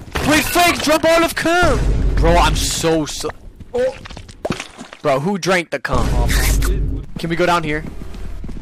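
Damaged data in the compressed stream corrupts a short run of frames, so the decoder loses sync and emits a brief glitch from 0.95 to 0.97 s.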